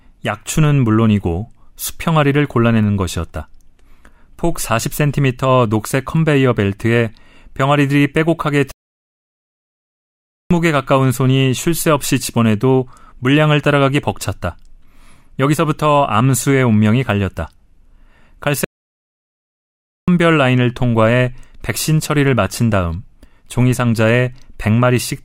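At 8.71 s the speech halts mid-flow and the output goes completely silent until 10.51 s, a gap of about 1.8 s. The same playback stall recurs from 18.64 s to 20.08 s, lasting about 1.4 s. Each time, the player most likely ran out of buffered data or had its thread blocked, then resumed. On a waveform each stall is a flat, near-silent line, and on a spectrogram it is a fully blank vertical band with abrupt edges.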